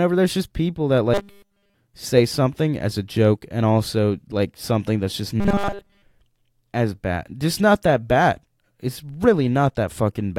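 Robotic sound from repeated short buffers appears from 1.14 to 1.75 s, after "there's just people that", and again from 5.40 to 6.02 s, after "like something that's just". Both spans become a rigid metallic 200 Hz buzz, which fits a 5 ms chunk looping nearly continuously, likely because fresh audio arrived too late.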